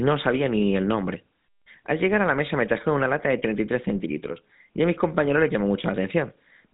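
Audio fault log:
throughout: GSM full-rate codec. The speech has a plainly audible buzzy, gravelly roughness, which fits the 13 kbps GSM full-rate coder. It rebuilds the voice from a vocal-tract model excited by a sparse, regularly spaced pulse train, so the fine detail of the sound is lost. Nothing passes above 3.8 kHz. On a spectrogram the energy stops at a hard ceiling near 3.8 kHz, and the harmonics look smeared and grainy. The waveform looks coarse and slightly pulse-like.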